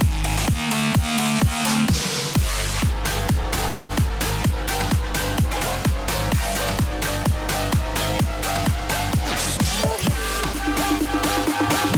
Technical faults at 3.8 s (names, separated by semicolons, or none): call audio freeze